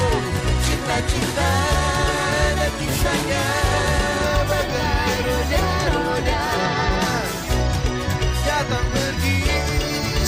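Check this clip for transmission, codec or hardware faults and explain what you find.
One hardware fault is audible: periodic clock jitter from the start to 4.23 s. Interference wobbles the converter's sampling clock at around 2 kHz. Each component gains sidebands spaced that far above and below it. Higher components suffer most. The sound takes on a rough, metallic edge.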